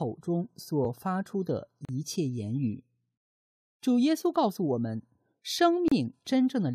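Gaps between stream segments fall at 0.85 s (about 4 ms), 1.85 to 1.89 s (38 ms) and 5.88 to 5.92 s (33 ms): mistimed 1-second segments leave holes filled with silence, heard as abrupt dropouts and seen as hard-edged blank columns and flat waveform stretches.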